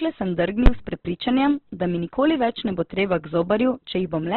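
Throughout this short speech recording the sound is dull and boxed-in, with nothing above about 4.1 kHz, and what remains has a rough, grainy, noisy texture rather than clean tone. That points to heavy Opus compression as the likely cause. Its music-style coding keeps each band's energy but, starved of bits, fills the detail with folded or noise-like content, and the narrowband limit fits a very low rate of around 12 kbps. At 0.66 s, just before "s prepričanjem da mi", there is a single sharp bang. This comes from invalid numbers at full scale: a calculation went infinite or invalid, and the output was pinned at an extreme value for one processing block. Because the block is only about 12 ms long, which fits a 512-sample block, the pops at its start and end merge into one loud crack.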